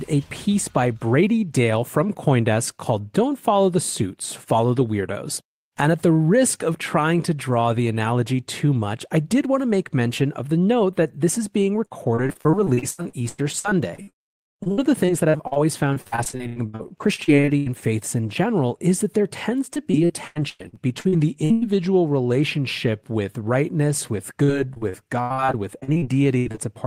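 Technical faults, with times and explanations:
11.85–15.58 s, 15.94–17.68 s (before "faiths in general is"), 19.74–21.64 s and 24.44–26.59 s, repeated packet loss (robotic sound): 12 to 32 gaps per stretch, each under 0.1 s, are bridged by extending earlier sound, producing choppy speech with pieces missing.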